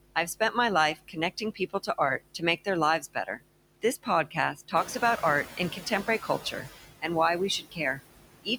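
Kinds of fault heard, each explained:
Mains hum: A steady 50 Hz drone, plus a few low harmonics, runs under the whole clip, most likely from a ground loop or a nearby transformer leaking the power line into the signal. It's strong too, only about 10 dB below the speech.
Noise suppressor artifacts: The suppressor is turning down whichever bands it reckons are steady noise, frame by frame. So the background dips between words and swells under them.
Speech cut by the noise suppressor: In several stretches, 0 to 0.56 s, 0.95 to 2.67 s, 3.0 to 7.04 s and 7.59 s to the end, the suppressor mistakes parts of the speech for noise. Soft consonants and word endings get pulled down by about 20 to 22 dB and sound swallowed.
Noise suppressor catching up: The room noise jumps by about 10 dB around 5 s, and the suppressor's noise estimate lags behind. From 4.75 s that louder background comes through with little reduction, then sinks by about 10 dB as the suppressor adapts over roughly 1.7 s, settled by 6.47 s.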